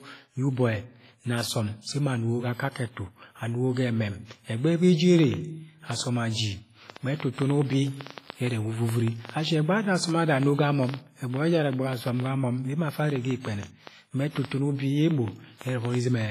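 Speech, with heavy codec damage throughout. The sound rings and washes, and a hiss rises and falls with the speech. Nothing is present above 15.4 kHz. This is likely WMA compression at a low bitrate, around 24 kbps. Quantisation noise smears across long transform blocks, and weak components drop out. From 5.19 s to 16.22 s, a train of clicks ticks over the sound, pauses included. They arrive about five times a second, at an uneven pace. There are about fifty in all. They peak roughly 15 dB above the signal. Something is likely injecting pulses, from nearby equipment, a faulty connection or a power supply. Pre-echo appears at 7.33 to 7.38 s. A short hiss spreads over 52 ms before an attack, and the attack sounds softened. The attack fell late in a coding block, so noise sized for it filled the quiet moment before.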